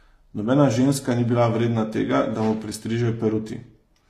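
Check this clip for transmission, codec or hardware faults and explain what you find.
A codec fault runs through the whole clip. The speech sounds like transcoding between lossy codecs, likely an HE-AAC stage near 24 kbit/s followed by Vorbis around 58 kbit/s. Nothing is present above 15 kHz. The second encoder spends its bits on the first one's damage and adds its own. So the two stages' different artefacts are heard together on the speech.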